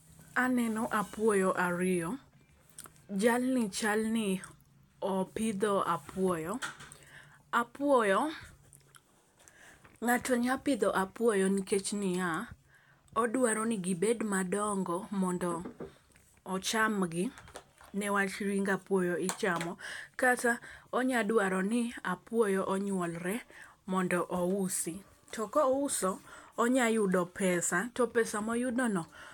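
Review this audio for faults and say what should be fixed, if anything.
No faults were heard; nothing needs fixing.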